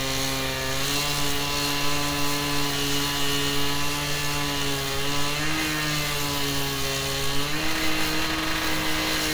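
No technical faults are audible.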